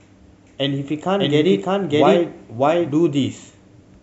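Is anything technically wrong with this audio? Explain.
Yes, there's a doubled audio track from 1.20 s to 2.92 s. A second copy of the speech runs underneath the first, trailing it by roughly 0.7 seconds and at about the same loudness, so everything seems said twice, out of step. It likely comes from the signal being picked up again through a slower path or an edit leaving two copies overlapping. The copy is clean and full-band with no room tail, and it cuts in and out abruptly at those two points.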